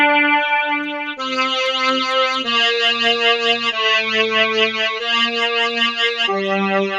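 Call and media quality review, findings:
Noise suppressor applied to music or sounds, throughout. Level pumps by around 5 dB. Speech-tuned suppressor treats steady tones and tails as noise.

Sound cut by the noise suppressor, 0.69 to 1.2 s. Drops by about 11 dB for roughly half a second. Sustained content is misclassified as noise and attenuated.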